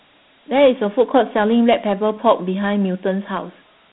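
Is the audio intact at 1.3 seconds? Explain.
No. Dialogic VOX ADPCM runs throughout the clip, including 1.3 s. Each sample is coded as a 4-bit step, which at about 32 kbps points to 8 kHz sampling. Nothing remains above 3.8 kHz, and a gritty hiss plainly trails the speech.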